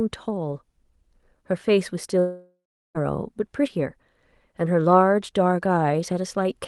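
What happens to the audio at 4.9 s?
Nothing goes wrong at 4.9 s: the speech there comes through intact, carried by the call's Opus codec at its usual bandlimited quality, with no dropout, glitch or distortion.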